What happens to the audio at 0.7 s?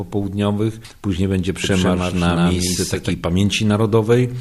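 Nothing goes wrong at 0.7 s; the audio carries on intact through that moment with no audible fault.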